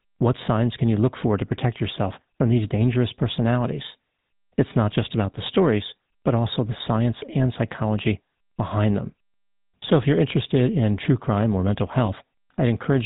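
Buzzy, gravelly speech with a rough, reedy edge runs through the whole recording, and nothing above 4 kHz comes through, so sibilants sound dull and clipped. That character is the GSM full-rate codec, which fits its 13 kbps rate. It rebuilds the voice from a vocal-tract model excited by a sparse, regular pulse train that keeps only a third of the excitation samples, so the fine detail of the voice turns into a grainy buzz. Right after "true crime or mental", from 12.06 to 12.09 s, the sound briefly freezes into a short metallic ring. These are lost GSM frames. The gap sounds like a single missing 20 ms frame, and the decoder filled it by repeating the last good frame's parameters, holding a rough ringing tone in place of the real speech for that instant.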